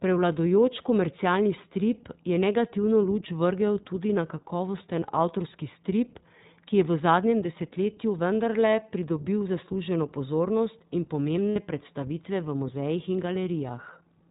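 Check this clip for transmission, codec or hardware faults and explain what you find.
The clip shows two faults: coding by the iLBC codec throughout, and lost iLBC frames at two points.

The iLBC codec damage is plainly audible across the whole recording. This narrowband codec discards everything above 4 kHz. It codes each frame's excitation independently, and the speech sounds slightly rough and synthetic. The sound fits its 15.2 kbps, 20 ms frame mode.

Lost iLBC frames occur at 5.00 to 5.03 s, a 20 ms gap, and at 11.51 to 11.58 s, a 60 ms gap. The decoder fills each gap by repeating the last pitch cycle mixed with noise. Each gap is heard as a brief held, buzzy vowel. The longer gap fades as it continues. The voice returns to normal almost immediately afterward.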